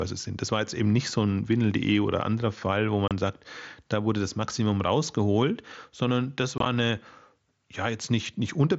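Voice packets between headset and phone were dropped without concealment, unconcealed Bluetooth headset packet loss over the wideband mSBC link: at 3.08 s a 30 ms gap cuts the speech with abrupt edges, and from 6.58 to 6.66 s several short holes chop it roughly.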